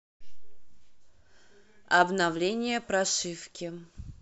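Nothing stood out as a technical fault on listening to the speech.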